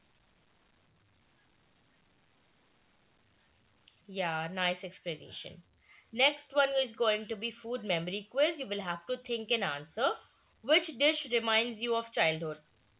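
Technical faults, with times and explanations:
The speech carries the character of a normal call path, with its content band-limited to nothing above 4 kHz in a way that fits narrowband G.711 A-law coding.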